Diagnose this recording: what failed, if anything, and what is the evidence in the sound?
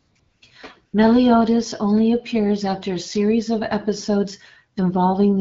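The background turns into a smooth, even hiss that switches in and out, from 0.00 to 0.15 s, 0.19 to 0.41 s and 0.85 to 0.93 s, replacing the room sound each time. This is AMR comfort noise, from the codec's discontinuous transmission in call processing. The sending phone judged the talker silent and stopped sending speech frames, and the receiver synthesised filler noise from a rough level-and-spectrum description. The underlying AMR wideband (HD Voice) coding sounds clean enough to fit 12.65 kbit/s.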